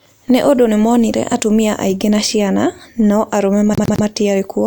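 Repeated frames occur from 3.72 to 4.04 s. A block of about 104.5 ms, which fits a short run of compressed frames, was written or delivered more than once, so the decoder plays the same slice of speech again three extra times. The result is a rapid stutter, the same fragment looping before the audio moves on. Because nothing is skipped to compensate, the duplicated material adds 313.5 ms to the clip's running time.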